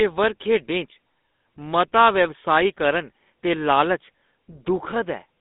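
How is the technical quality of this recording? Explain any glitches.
The technical quality is poor, degraded throughout by GSM full-rate codec damage. The speech sounds buzzy and gravelly, squeezed into roughly 200 Hz to 3.6 kHz with nothing above 3.8 kHz, consistent with a 13 kbit/s pulse-excited vocoder. Plain band-limiting would sound dull, not rough like this.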